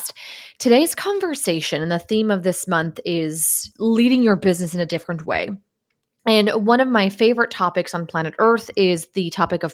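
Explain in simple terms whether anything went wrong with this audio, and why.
Right after "theme of this month", from 3.49 to 6.07 s, there is a call bitrate drop. The connection's estimated capacity fell, so the encoder squeezed the speech into fewer bits, making it sound coarser and less crisp. Quality returns once the bitrate recovers.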